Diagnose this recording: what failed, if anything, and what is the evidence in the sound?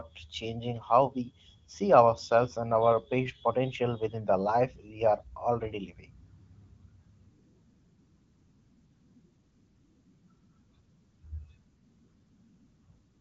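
Nothing failed: the speech runs through an AMR wideband (HD Voice) link whose clear, lightly coded sound with an upper band ending near 7.5 kHz fits a mid-to-high rate of about 15.85 kbit/s, as expected for that path.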